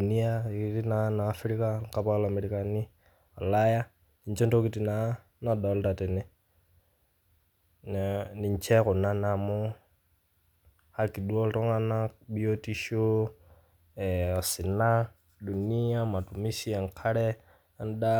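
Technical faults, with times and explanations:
Nothing stood out on listening to this speech recording.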